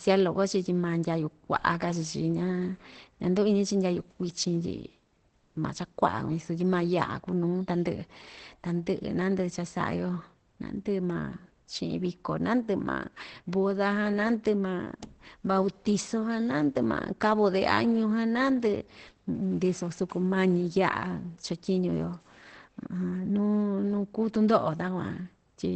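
From start to finish the speech is band-limited and rough: nothing sounds above about 8.6 kHz, and the voice comes across muffled and hoarse, without the watery swirl typical of MP3. That combination is likely Opus compression running in its SILK speech mode at wideband, with the plainly audible damage pointing to a low rate around 16 kbps rather than a simple low-pass filter, which would dull the top without the hoarseness.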